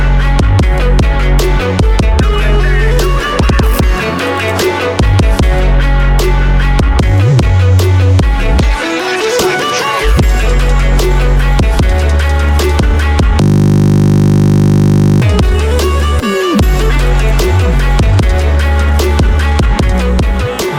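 From 13.42 to 15.22 s there is a system hang loop. The system froze and a 20 ms buffer repeated about 90 times, producing a steady 50 Hz buzz.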